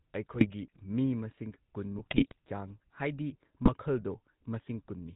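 The whole clip has a buzzy, gravelly roughness, and nothing comes through above 4 kHz. This is the GSM full-rate codec. It rebuilds speech from a vocal-tract model driven by sparse, regular pulses, which fits a 13 kbps coder, and the damage is plainly audible.

Three bursts of squawking and gargling break in at 0.34 to 0.47 s, 1.96 to 2.38 s and 3.64 to 3.70 s. The middle one is the longest. These are GSM bit errors: corrupted filter, pitch and gain values reached the decoder, warping the spectrum and jolting the level frame by frame.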